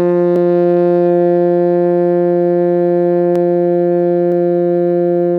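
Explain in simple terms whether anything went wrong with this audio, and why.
Yes. The music jumps abruptly three times, at 0.36 s, 3.36 s and 4.32 s. The first skips roughly 40 ms, the others about 10 ms. This is likely a dropped buffer (overrun): the recording software fell behind, so short pieces were overwritten and lost.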